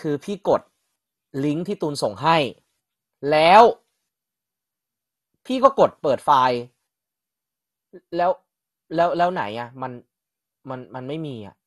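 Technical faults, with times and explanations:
Throughout, MP2 compression: the speech has likely passed through an MPEG Layer II encoder short of bits, which fits a rate near 64 kbps. Upper sub-bands are shut off, leaving nothing above 12.2 kHz, and coarse quantisation of the remaining bands adds a dull, gurgling, granular grain.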